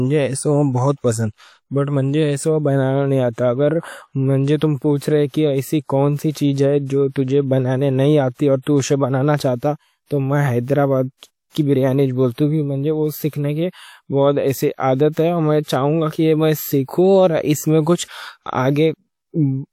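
A transform codec has spread its quantisation noise across whole blocks, so noise sized for sharp speech attacks leaks into the quiet just before them. The result is pre-echo: a brief hiss ahead of each attack, which then sounds softened and smeared. It occurs at 4.57 s (48 ms), 6.31 s (37 ms), 8.62 s (46 ms), 11.50 s (52 ms) and 12.33 s (50 ms).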